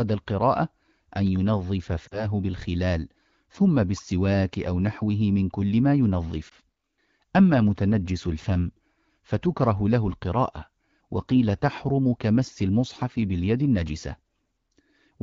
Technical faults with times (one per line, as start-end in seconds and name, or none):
2.08-2.26 lost AMR speech frames
6.49-6.54 lost AMR speech frames